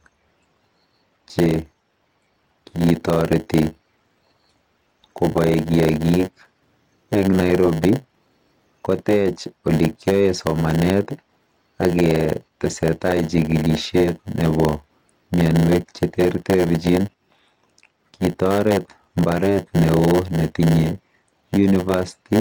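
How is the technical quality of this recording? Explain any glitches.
The recording has a block size mismatch (padded) running through the whole clip. One stage hands over blocks slightly shorter than the next stage expects, and zeros fill the remainder, so every block carries a brief silent gap. That gap repeats as a buzz at 100 Hz, and the speech plays slow, at 0.919 times normal speed, while its timbre stays the same.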